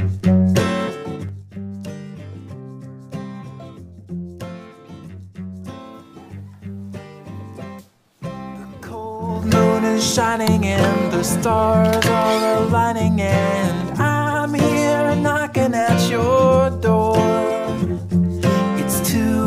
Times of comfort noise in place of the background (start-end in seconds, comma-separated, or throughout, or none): none